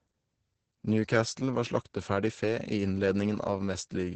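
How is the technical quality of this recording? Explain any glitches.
The speech is heavily degraded by Opus voice compression throughout. Nothing sounds above 8.8 kHz, and the low bitrate, which fits about 10 kbps, codes the excitation coarsely, making the voice hoarse, muffled and slightly robotic rather than merely dull as with a simple filter.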